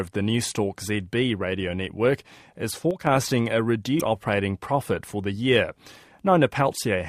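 From 2.91 to 3.07 s, right after "radio network is", the level falls abruptly by about 6 dB and recovers after roughly 0.16 s. This is a one channel drops out fault. The likely cause is one side of a stereo source going silent before the mono sum, so the content shared by both channels loses half its contribution. The result is a sudden dip in loudness rather than a fade.

From 3.99 to 4.01 s, just before "operating profit for the", the audio skips forward with a short glitch lasting about 28 ms. This is a broken MP3 bit reservoir fault, and the duration fits roughly one MP3 frame of about 26.1 ms. The likely cause is missing frames: the next frame looks back for data it had stored in earlier frames and finds unrelated bytes there. The decoder produces a brief corrupted fragment and then resumes further along in the material.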